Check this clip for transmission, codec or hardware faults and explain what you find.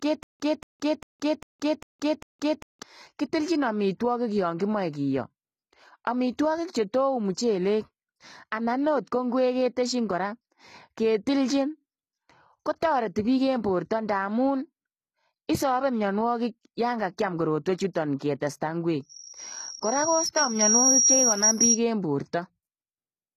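There are four problems: codec damage throughout the speech, a stutter at the very start, a short pre-echo, and a feedback squeal near the end.

HE-AAC compression, likely, runs through the whole clip. The damage is plainly audible, and nothing reaches above 14.9 kHz. The treble is rebuilt by spectral band replication rather than coded directly: lower bands are copied upward and shaped with a coarse envelope. The harmonics up there don't line up with the real ones, so the top end sounds synthetic. That fits HE-AAC v2 at a low bitrate of around 20 kbps.

There's a stutter with silent gaps already running when the clip opens, lasting from 0.0 to 2.83 s. A 229 ms fragment plays, then about 170 ms of dead silence follows, and the cycle repeats every 399 ms, six times in all. That's likely a stalled player or stream replaying its last fragment on each retry and then running dry. Whatever should have played during those 2.8 seconds is gone.

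Pre-echo shows up at 18.19 s, with a short hiss spreading about 17 ms ahead of a sharp attack. A transform codec spreads quantisation noise evenly across a block. When the onset lands late in the block, noise sized for the loud part leaks into the quiet moment before it. You hear a brief smear in front of the attack, which also loses some of its crispness.

The loudspeaker feedback squeal runs from 18.98 to 21.79 s. A tone at 5.7 kHz swells over roughly two seconds and ends up around 10 dB above the signal. That's a mic picking up the speaker it feeds, with the loop gain going over one at that frequency. The tone keeps feeding itself until something limits it or the loop breaks.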